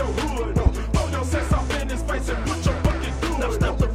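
A sharp loud pop at 0.66 to 0.69 s, then a double pop at 2.85 to 2.94 s, both jumping well above the sound, which continues underneath, likely from a voltage spike such as a switch, static or driver glitch.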